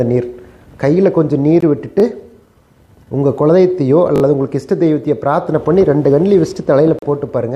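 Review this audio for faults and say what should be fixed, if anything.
The likely cause of two gaps is a Bluetooth stall: radio interference delayed packets, the headphone buffer emptied, and playback halted until resends arrived. The sound drops to silence for about 19 ms at 1.6 s and about 37 ms from 6.99 to 7.02 s, then resumes. Keeping the phone close to the headphones, away from Wi-Fi congestion, or using a larger receive buffer would prevent these stalls.

A repeated buffer occurs twice: fresh audio missed its deadline, so the device replayed its last 20 ms block. At 2.0 s one extra play produces a brief stutter; from 4.16 to 4.22 s three extra plays give a short stutter. No audio appears lost. Larger output buffering or a less loaded playback thread would stop these repeats.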